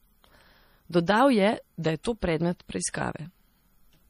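Throughout the speech, a lossy codec, likely MP3 at a low bitrate around 40 kbps, has run short of bits, cut everything above 15.3 kHz and dropped weak frequency lines from frame to frame, leaving plainly audible watery, swirling smear and metallic chirps on sibilants.

At 2.03 s, just before "to predmet", pre-echo appears: the codec spread quantisation noise across a whole block, so noise meant for the sharp onset also fills the quiet moment ahead of it. A brief hiss of about 17 ms precedes the attack, which sounds softened.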